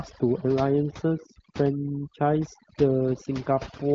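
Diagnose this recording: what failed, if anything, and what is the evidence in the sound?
Overdone noise removal in the call processing stage runs throughout this speech. The background drops and breaks up into twinkling specks, because the over-aggressive suppressor cuts whole frequency bands whenever they sit near its noise estimate.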